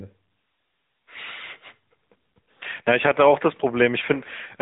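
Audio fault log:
throughout AMR narrowband mobile codec: the speech is rebuilt from a vocal tract model fed by a pitch predictor and sparse pulses, leaving plainly audible codec damage that fits the 10.2 kbps mode; a spectrogram shows energy cut off sharply at 3.8 kHz, empty above.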